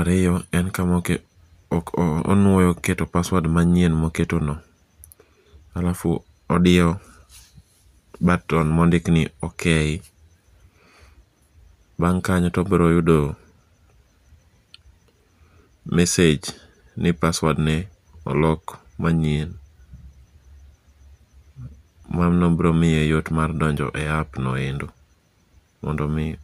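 A speech recording, and nothing in it is technically wrong.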